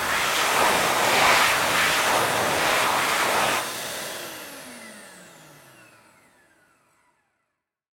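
Listening through this recording of everyday sounds, nothing stood out as a technical problem.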